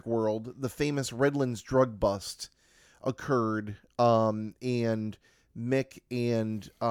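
No technical faults can be heard at any point in this speech recording.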